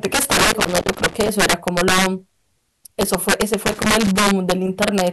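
Throughout the speech, integer overflow breaks the louder peaks. The signal is driven about 10 dB past the integer limit, so a few percent of samples wrap to the opposite sign instead of holding at full scale. Each wrap is a violent crack, far harsher than clipping's flattened buzz.

From 0.51 to 1.29 s, and again from 3.66 to 4.20 s, loose connector crackle appears. A worn contact is rapidly making and breaking, chopping the signal into an irregular scratching burst. Unlike the overflow, it arrives in bounded stretches regardless of loudness.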